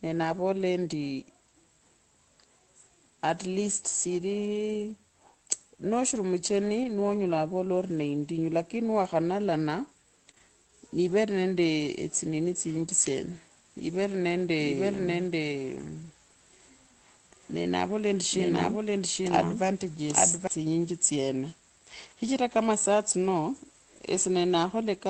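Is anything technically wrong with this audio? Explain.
Yes. Short concealed packet loss occurs right after "lakini niwakhanalana", at 10.31, 10.35 and 10.38 s. Each consecutive 20 ms packet arrived too late and was filled by extrapolation, giving a brief smeared wobble.

A doubled audio track runs from 14.59 to 20.47 s. A full-band copy at about the same level trails about 0.7 s behind, with no room colour, and cuts in and out abruptly. It was likely caused by a second, slower capture path.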